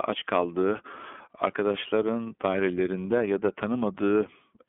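Throughout the speech, the iLBC codec sets the sound. The band sits between roughly 250 Hz and 3.4 kHz, so the low body and all upper sibilance are gone. Each frame's excitation is coded on its own, which fits iLBC's 30 ms mode at 13.33 kbps. The damage is plainly audible as a rough, slightly synthetic texture.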